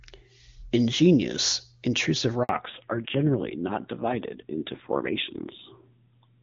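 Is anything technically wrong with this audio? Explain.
Yes. There are two related faults in this speech clip.

At 2.43 s there is a handover gap lasting 60 ms, until 2.49 s. The call switched networks, and no speech frames arrived during the switch. The voice fades out quickly and falls silent. Whatever was said in that moment is lost.

From 2.49 s to the end, there is a fallback to narrowband. Before this point the HD Voice wideband path sounds clear. Afterwards the call runs on an older narrowband codec, and nothing above 4 kHz remains. The speech turns dull and muffled, with a rough, raspy edge that points to a low-rate narrowband mode.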